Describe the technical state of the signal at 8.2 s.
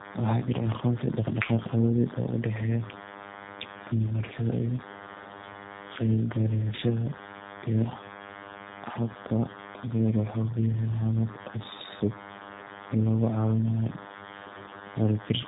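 DECT cordless phone buzz is present at 8.2 s, as throughout the clip. A nearby base station's radio bursts, rectified in the audio circuit, produce a thin 100 Hz buzz with many harmonics, roughly 15 dB below the speech.

Tandem speech coding also affects 8.2 s and the whole clip. The speech sounds rough, muffled and warbly, with nothing above 3.8 kHz, which fits two passes through a G.729A coder with re-encoding between them.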